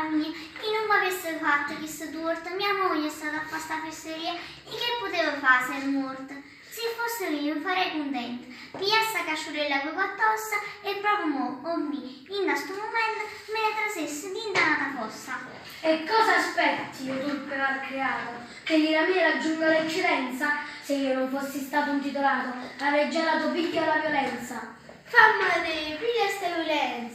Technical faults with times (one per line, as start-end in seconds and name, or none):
none